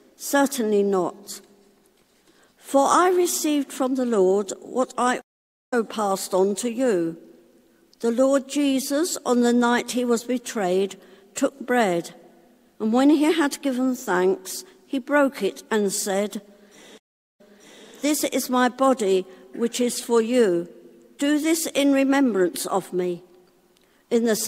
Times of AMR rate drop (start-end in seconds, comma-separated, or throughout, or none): none